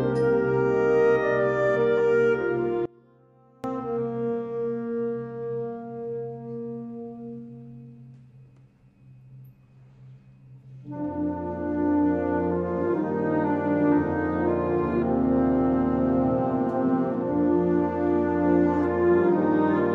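At 2.86 s the audio drops out to a faint residue for 0.78 s, returning at 3.64 s. The leftover sits about 30 dB below normal, likely a lost feed with the path still live. The waveform shrinks to a sliver, and the spectrogram darkens between sharp edges.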